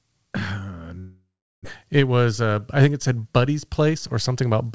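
From 0.99 to 1.67 s, the audio stops arriving, most likely a long network dropout. The last sound smears into a fading buzz, then about 0.38 s of silence.

From 3.79 to 4.36 s, a jitter buffer speed-up trims short pitch-period pieces, about 50 ms in all. The speech runs 8% faster and sounds hurried, with unchanged pitch.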